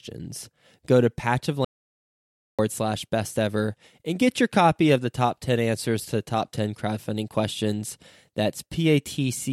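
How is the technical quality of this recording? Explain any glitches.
The recording has one clear glitch: an audio dropout to silence in the speech between 1.65 and 2.59 s. The voice cuts off abruptly, and for about 0.94 s there is silence, with even the background room tone gone, before the speech snaps back in on "slash best ever and". The cause is likely a momentary loss of the input signal, such as a disconnected device or a brief mute, while the recorder kept writing silence, so whatever was said in that gap is lost.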